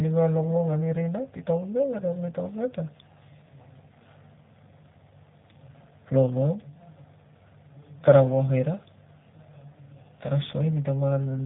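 From start to finish the speech sounds hollow and phasey, as if heard down a tube, with a fixed coloration that never moves. This is channel delay (comb filtering). One channel runs roughly 1.5 ms behind the other, and when the two are summed to mono, the parts they share cancel at evenly spaced frequencies. The first notch falls at around 300 Hz, and further notches repeat up through the spectrum.

Also throughout, the speech is narrow, slightly rough and synthetic, with a plainly audible coded texture, and nothing at all above 3.8 kHz. This is G.729 codec damage, and the sound fits an 8 kbit/s G.729A stream. The codec rebuilds each short frame from a vocal tract filter, a pitch predictor and a few pulses, and discards everything above the band. That loses natural detail and produces the artificial grain.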